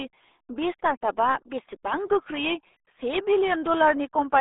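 From start to finish, the speech carries RealAudio 14.4 codec damage. The band runs from about 300 Hz to 3.6 kHz, with nothing above 3.8 kHz, and heavy coding smears consonants into a muffled, gargly texture, consistent with an 8 kbit/s dial-up-era stream.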